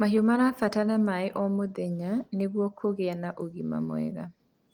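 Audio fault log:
No audio faults are logged for this clip.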